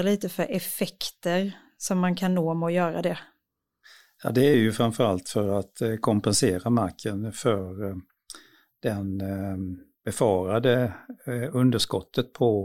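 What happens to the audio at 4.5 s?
At 4.54 s the speech jumps forward, and about 20 ms of sound is missing, with no gap of silence. This is likely a dropped buffer (overrun): the samples were overwritten before being read, so the surviving audio on either side is spliced directly together.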